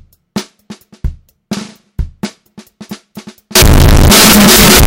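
From 3.55 s to the end at 4.86 s, the audio turns into a float read as integer fault. The likely cause is 32-bit float samples decoded as 32-bit integers, so sign and exponent bits dominate. The sound is a very loud, harsh buzz with noise as loud as the content. The waveform looks nearly square at an almost fixed, high level, and the spectrogram shows dense broadband energy.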